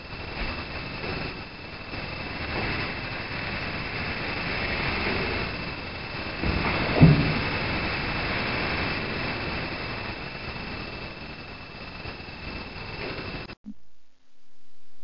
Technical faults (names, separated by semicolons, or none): wrong sample rate